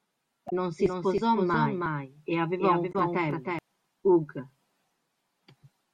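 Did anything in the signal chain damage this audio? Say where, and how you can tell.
Yes. The codec or storage stage shows damaged data in a compressed stream: brief disruptions at 0.47–0.53 s and 2.91–2.95 s. Corrupt bytes in the coded frames there made the decoder misread them, lose frame sync and skip ahead to the next valid header.

A doubled audio track runs from 0.79 s to 3.59 s: a second, full-band copy of the speech trails about 300 ms behind, roughly 5 dB down, with no reverberant tail or room colouring, and it switches on and off abruptly. That points to a likely editing or routing error at the mixing stage, where a delayed duplicate of the same signal was summed in alongside the original.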